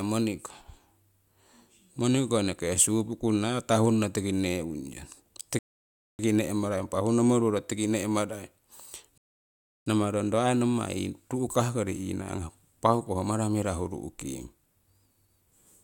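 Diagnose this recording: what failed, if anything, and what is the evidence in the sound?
Playback side, rebuffering stall, twice: the speech drops to silence at 5.59 s until 6.19 s, then again from 9.18 to 9.86 s, and each time it picks up exactly where it left off. The player's buffer ran dry and waited for more data, so nothing's missing, just about 0.6 s and 0.69 s of dead air added.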